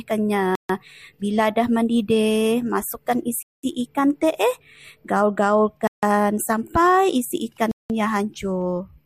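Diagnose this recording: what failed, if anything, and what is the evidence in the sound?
Likely Bluetooth stall at 0.55–0.69, 3.43–3.64, 5.87–6.03 and 7.71–7.90 s. The sound cuts to silence for 0.14 to 0.21 s, then resumes, as delayed wireless packets starve the headphone playback buffer.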